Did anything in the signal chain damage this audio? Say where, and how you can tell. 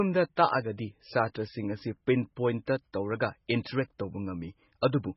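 Yes, the codec stage. The speech has nothing above 5.6 kHz and sounds watery and swirly throughout, likely heavy MP3 compression at a very low bitrate, around 16 kbps.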